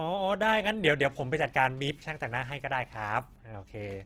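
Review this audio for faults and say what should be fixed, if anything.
Across the whole clip the speech sounds rough and grainy with nothing above 17.6 kHz, likely Opus compression in music mode, fitting about 16 kbps. To prevent it, encode at a higher Opus bitrate or keep the uncompressed source.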